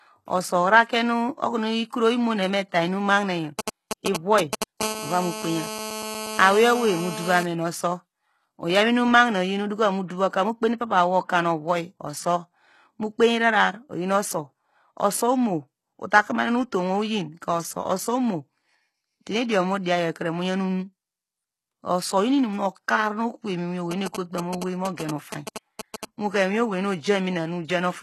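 Speech clip, and it has several things going on. Throughout, the treble stops dead at about 12.3 kHz and the codec damage is plainly audible, with upper bands that don't quite belong to the lower ones. That's likely HE-AAC compression at a low bitrate, around 16 kbps, rebuilding the top end by copying lower bands upward. From 3.59 to 4.64 s there are GSM signalling bursts, a galloping dit-dit-dit of short 217 Hz buzzes at about the same level as the speech. That's a nearby 2G phone's radio bursts getting rectified by the audio circuit. Then comes a GSM phone buzz from 4.81 to 7.43 s, a steady raspy 217 Hz buzz with lots of harmonics sitting about 8 dB under the speech, typical of a phone transmitting during a call. A pre-echo runs from 10.07 to 10.10 s, a 27 ms smear of hiss ahead of a sharp attack, where the codec's block noise spills into the quiet moment before it. Finally, GSM signalling bursts come back from 23.91 to 26.05 s, the same 217 Hz dit-dit pattern, roughly 5 dB below the speech this time.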